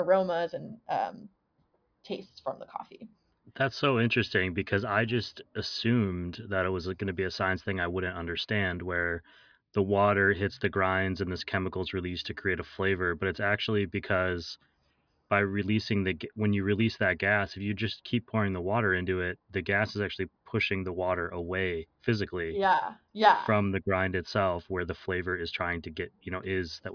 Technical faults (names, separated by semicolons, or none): none